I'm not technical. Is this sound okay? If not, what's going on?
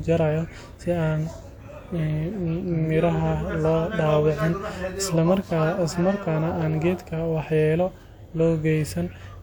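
Yes, this recording sounds fine; nothing is wrong.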